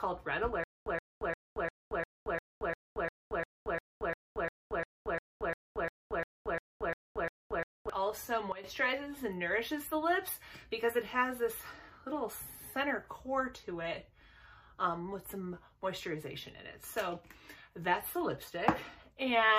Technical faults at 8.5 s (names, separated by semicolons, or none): sudden gain jump